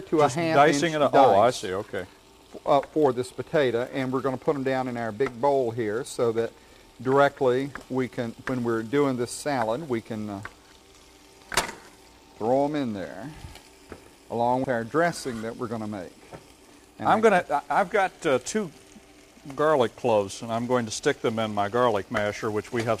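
At 14.64 s, damaged data in the compressed stream makes the decoder lose sync and hunt for the next frame header. It sounds like a brief chirp, squawk, click or hole.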